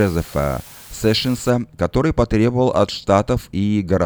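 From the start to about 1.5 s, the speech sits under a constant, even hiss, low bit depth with dither. It sounds like only 7 bits, with dither turning the rounding error into steady white noise around 25 dB below the signal, no distortion, clearing just before "который потребовал от".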